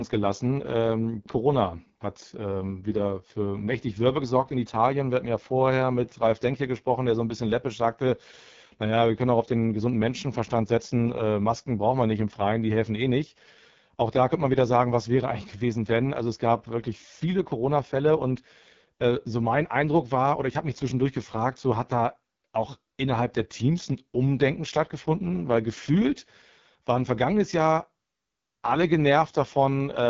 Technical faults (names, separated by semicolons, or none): AMR wideband (HD Voice) codec